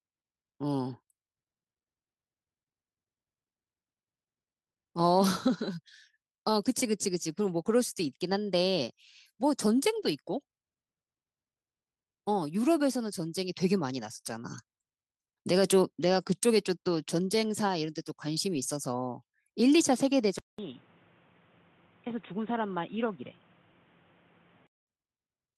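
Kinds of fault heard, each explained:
Lost packet rebuilt from error correction: Bits of audio went missing, but the following packet carried a rough low-bitrate copy that got played instead. You hear brief grainy, noisier patches at 0.93, 9.9 (about 80 ms), 14.17 and 18.54 s, with no actual gaps.
Short concealed packet loss: Right after that 14.17 s patch, about 20 ms never arrived at 14.21 to 14.26 s. The decoder stretched the preceding sound over the hole and blended back in, so it comes across as a quick smear or wobble.
Input switched to a poorer device: From 20.39 to 24.87 s the sound goes dull and boxy, with nothing above 3.8 kHz, drops a few dB in level and gains background noise around 30 dB below it. A 200 ms silence marks the switch, likely a change to a lesser microphone or headset.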